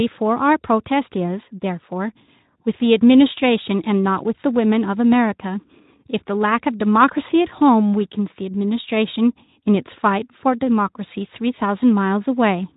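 No technical faults are audible.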